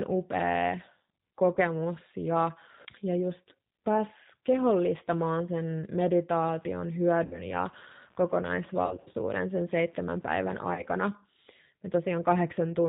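Throughout the clip the speech carries the plainly audible roughness of the G.729 codec at 8 kbit/s: a slightly synthetic, buzzy texture from pulse-based reconstruction, with a spectrogram showing nothing above 4 kHz and smeared, blocky harmonics.

At 1.55 s, just before "ja ja", VoIP packet loss concealed by the speech codec fills a gap of about 20 ms with extrapolated sound. Similar gaps follow at 7.25 s (about 60 ms), 8.86 to 9.15 s (140 ms scattered over 280 ms, longest run 60 ms) and 10.74 s (about 40 ms). Each is heard as a brief buzzy or noisy, fading stretch, seen as flattened harmonics and a decaying envelope.

From 6.44 to 10.50 s, computer activity noise adds a scratchy buzz pulsing at about 70 Hz, roughly 35 dB below the speech. It shows as faint vertical striations on the spectrogram that are unrelated to the speech envelope.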